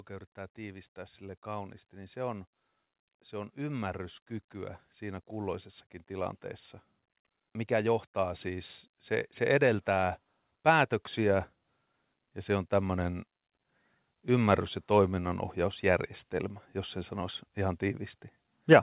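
From 0.55 to 2.48 s, 3.05 to 6.41 s and 7.1 to 11.45 s, automatic gain rising swells voice and background together by about 4, 5 and 6 dB, over a band-limited call path topping out at 4 kHz.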